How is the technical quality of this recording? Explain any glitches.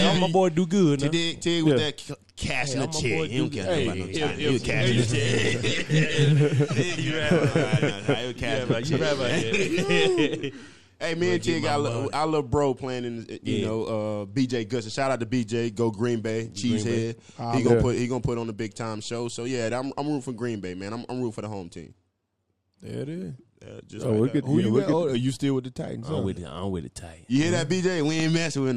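The recording has one clear glitch, a loud pop right near the end. From 28.20 to 28.22 s, a single sharp pop jumps out at roughly 10 dB above the surrounding sound, while the audio continues underneath it. Its abrupt onset and very short length point to a brief voltage step or pulse entering the signal chain, likely from a plug, switch, static discharge or driver glitch, which the downstream circuits then shaped into this quick thump.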